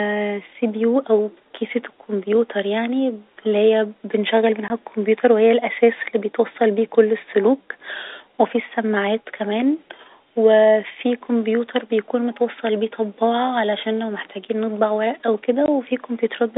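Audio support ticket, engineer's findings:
Packet loss filled with silence at 4.68–4.70 s, just before "الكمبيوتر و هي الأساس", and at 15.66–15.68 s, just after "محتاجين نطبع ورق او". Each gap is 20 ms, which fits one lost packet. The receiver substituted silence, leaving hard-edged holes in the G.711 telephone-band audio.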